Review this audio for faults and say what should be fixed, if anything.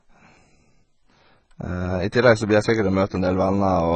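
The speech carries AAC compression damage from start to end. Nothing survives above 8.7 kHz. The top is dull and sibilants sound smeared and fizzy. This heavy damage likely comes from AAC-LC at a very low bitrate, around 16 kbps, which starves the upper bands. Prevent it by encoding at a higher bitrate or keeping an uncompressed master.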